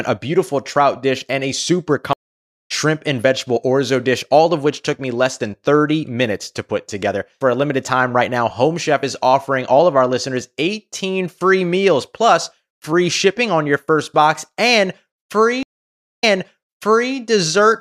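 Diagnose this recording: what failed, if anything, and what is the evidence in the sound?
Network-side stream reconnect, twice. At 2.13 s the audio goes silent for about half a second, then resumes roughly 0.7 s further on. At 15.63 s a 570 ms gap is followed by 0.94 s replayed as the server resends. Each time the link broke and a fresh decoder restarted mid-stream.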